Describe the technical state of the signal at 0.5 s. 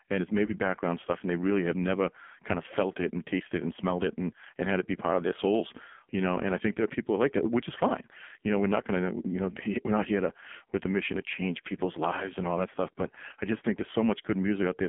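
At 0.5 s a lost AMR speech frame sits between 0.46 and 0.55 s. One 20 ms frame failed, and the decoder filled it by repeating the previous pitch and vocal-tract settings at reduced gain. The result is a brief dip or warble rather than a hard silent gap or click.

Beneath this runs the AMR narrowband mobile codec at 5.9 kbps, with the line band held to 200 Hz to 3.5 kHz. The heavy coding gives the speech a buzzy, synthetic edge, which a simple low-pass filter would not add.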